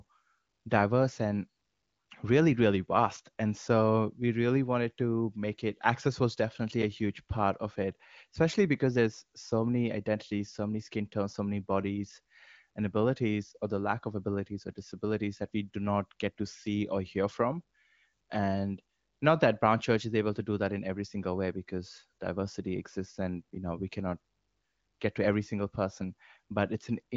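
No technical faults can be heard anywhere in the recording.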